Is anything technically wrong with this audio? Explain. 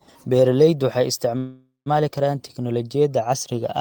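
Yes. A call audio freeze runs from 1.37 to 1.88 s in this speech clip. The likely cause is packets held up in transit so that the jitter buffer ran dry. The receiver stretched the last sound for about half a second, a decaying buzz or hiss that ends in roughly 150 ms of silence. When the packets arrive, the speech resumes where it stopped with nothing lost, now running about 490 ms later than before.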